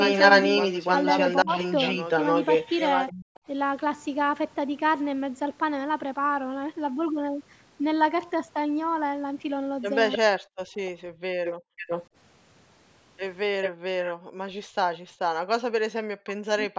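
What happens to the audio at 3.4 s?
A delayed copy of the sound, about 0.3 s behind and about 5 dB louder than the original, runs from 0.0 to 3.4 s. This is likely an echo leak from a loudspeaker. Between 3.3 and 3.42 s, background gated by the echo canceller cuts the room sound by up to about 40 dB, briefly dropping it out.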